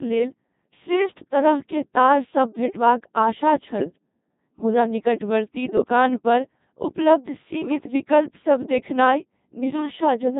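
A speech clip, heard entirely through a Codec 2 vocoder. The voice is rebuilt from sine waves using only pitch, voicing, energy and a spectral envelope, so it sounds heavily robotic and buzzy. The damage fits a very low rate near 2.4 kbit/s. Bit errors on digital voice radio break it further at three points: 3.79 to 3.98 s, 5.78 to 5.88 s just before "पर उपलब्ध", and 7.66 to 7.88 s between "पर उपलब्ध" and "विकल्पसभ देखनाइ". Flipped bits corrupt the pitch, level and spectrum values for whole frames, so the voice jumps and warbles into bleeps. The middle burst suggests the heaviest error rate.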